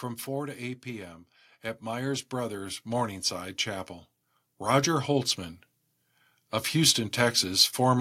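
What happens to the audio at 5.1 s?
At 5.1 s the level is climbing. This is automatic gain rising, running from about 4.58 s to 5.37 s. The automatic gain control judged the input too quiet and turned its gain up step by step, by about 4 dB overall. The whole signal gets louder together. The speech and the background noise swell as one, over roughly eight tenths of a second, rather than the talker getting louder.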